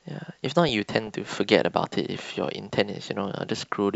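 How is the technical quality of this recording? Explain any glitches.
The recording has one glitch, a short burst of DAB burbling in the speech from 0.69 to 1.44 s. For that stretch the sound burbles, with short noisy blips popping over the speech. The cause is weak digital radio reception. A small fraction of a percent of bits slipped past error correction into the MP2 data, corrupting samples so that individual frequency sub-bands gave short blips of noise frame after frame across 33 frames.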